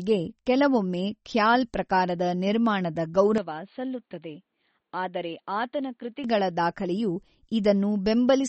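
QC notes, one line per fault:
Throughout: MP3 compression. The speech carries plainly audible codec damage, with nothing above 8.4 kHz, which fits a low bitrate around 32 kbps and a likely MP3 encode. Short of bits, the encoder cuts the treble at a fixed frequency and drops weak spectral lines that flicker on and off between frames. The result is a watery, swirly texture, with chirpy metallic edges on sibilants and softened consonant attacks.
3.38 to 6.24 s: input switched to a poorer device, just after "ಕೆಲವೊಮ್ಮೆ ಖ್ಯಾಲ್ ಪ್ರಕಾರದ ನಿರ್ಮಾಣದ". With no gap at the switch, the band narrows so nothing remains above 4.5 kHz, and the level falls by about 5 dB. A faint new noise floor sits roughly 50 dB below the signal. The sound turns dull and boxy, the likely result of capture moving to a narrower-band microphone or headset call profile, and it clears again at 6.24 s.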